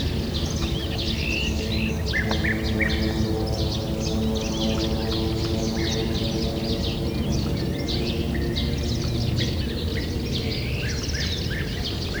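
Listening to these sounds, nothing technical stood out as a problem.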